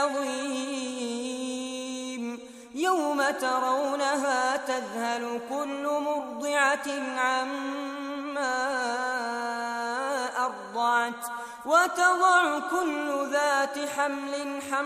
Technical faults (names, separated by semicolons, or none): none